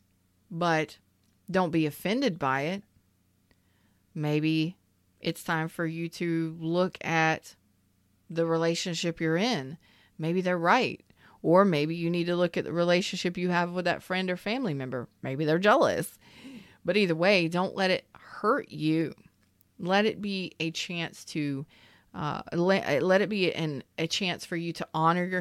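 A short speech recording, and there's nothing technically wrong to flag anywhere in it.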